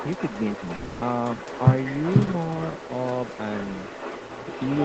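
Computer activity noise runs through the whole clip: a faint buzzing at roughly 70 pulses per second, very low, about 40 dB under the speech. It comes from processor or graphics load shifting the audio circuit's shared ground, so it follows machine activity rather than the speech.

Echo with no canceller is also present throughout. The far end's loudspeaker feeds back into its microphone, and nothing removes it, so each phrase returns roughly half a second later as a thinner copy at about 19 dB below the original.

From 0.75 to 1.03 s the speech gives way to a smeared, buzzy continuation of the last sound that fades without reaching silence. Then the speech resumes further along. This is likely a long network dropout: about 260 ms of audio never arrived, and the receiver filled the gap by extending what it already had.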